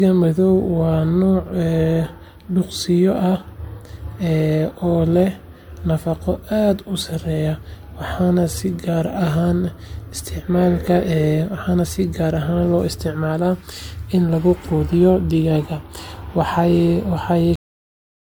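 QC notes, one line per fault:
Throughout: generation loss. The speech has a swirly, hollow, smeared quality, with consonant attacks blurring. This is likely from several passes through a roughly 96 kbit/s MP3 chain, each pass re-quantising on a shifted frame grid, so the noise and spectral holes stack up.
17.56 s: cut-off end. The audio stops in the middle of a sound and drops straight to digital silence with no natural decay. It's as if the final buffers never got written out, so the sound is simply chopped rather than finishing.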